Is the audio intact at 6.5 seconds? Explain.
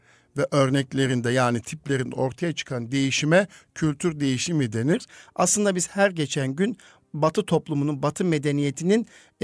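Yes, at 6.5 seconds the speech plays through intact, with no fault audible at that point.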